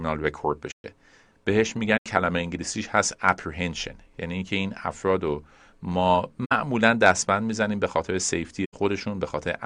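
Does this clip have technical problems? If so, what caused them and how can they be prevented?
Yes. The speech has four short damaged stretches: 0.71 to 0.84 s, 1.97 to 2.06 s, 6.45 to 6.52 s and 8.64 to 8.74 s. This is a corrupt frame concealed. Bit errors damaged a few AAC frames, and the decoder detected them and covered those frames with silence or a scrambled reuse of the last good spectrum. Each stretch lasts about 80 to 140 ms, which fits a handful of damaged frames. A raw bit error passed through would squeak or click, and a dropped packet would shift the timing. Protecting the stream with error checking and retransmission or forward error correction on the link would keep the frames from arriving corrupted.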